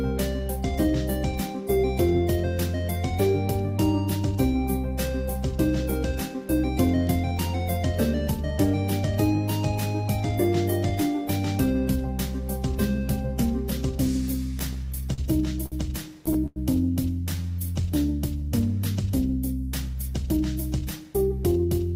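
The audio has three jitter buffer faults in its last seconds. From 14.59 to 16.59 s there are repeated stalls (stutter). The sound halts eight times as packets arrive late. Each gap is filled by extending the last sound, 273 ms in all, the longest 97 ms. Nothing is lost, but the flow drags and catches. From 17.36 to 17.83 s a jitter buffer slow-down follows. The receiver repeats single pitch periods to rebuild its reserve. It adds 56 ms, so playback runs at 90% speed with unchanged pitch, and sounds are drawn out. From 19.89 to 21.71 s a jitter buffer speed-up occurs. The buffer holds too much audio, so short pitch-period pieces are cut out, about a tenth of a second in total. Playback runs at 106% speed, still at the same pitch, and sounds hurried.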